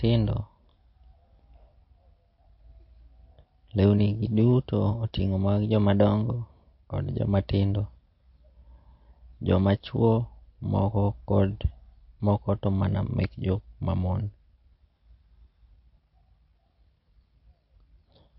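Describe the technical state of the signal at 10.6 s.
At 10.6 s the speech carries the same damage heard across the whole clip, likely from MP3 compression. Nothing survives above 5.6 kHz, so sibilants lose their hiss and sound dull. The encoder, starved of bits at a rate that fits roughly 32 kbps, has discarded weak frequency lines that flicker in and out between frames, giving a plainly audible watery, swirling texture and softened consonant onsets.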